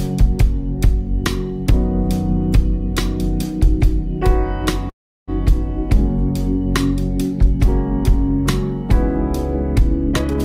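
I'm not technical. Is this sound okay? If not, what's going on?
No. There are two problems. The first is a call audio freeze from 4.89 to 5.30 s, likely caused by bits of the audio getting held up in transit so the receiving end ran out of sound to play. It filled the wait itself: the last sound carries on very briefly, then goes silent for most of that moment. Then the audio picks up exactly where it paused, so nothing is lost, but a gap of about 0.4 s is inserted.

The second is a jitter buffer speed-up from 10.09 to 10.41 s. The receiver had more audio stored up than it wanted, so it caught up by repeatedly snipping out tiny slivers, about 0.3 s in total. In that stretch the sound plays at 175% speed, clearly rushed, while its pitch stays the same rather than going squeaky.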